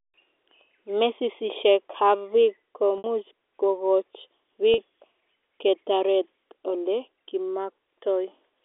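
At 2.98 to 3.04 s and again at 4.74 to 4.78 s, the speech shows packet loss with pitch repetition. Audio went missing, about 60 ms and then 40 ms, which fits three and two 20 ms packets. The receiver filled each gap by repeating the last pitch period. The shorter gap sounds like a briefly held, slightly buzzy tone, while the longer one fades out into silence before the speech returns with a short cross-fade, over a telephone band of roughly 250 Hz to 3.6 kHz.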